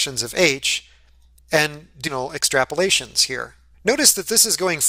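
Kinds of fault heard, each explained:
Skip ahead: Around 2.07 to 2.09 s the playback jumps forward with no gap filled in. Roughly 0.7 s of sound just vanishes, the kind of thing you get when a buffer overflows and drops a chunk while newer audio is already queued.
Jitter buffer speed-up: Right after, from 2.17 to 2.80 s, the receiver trims tiny pitch-period slices over and over to shed excess delay. It runs at 106% speed with unchanged pitch, losing about 50 ms in total, so it comes across slightly rushed.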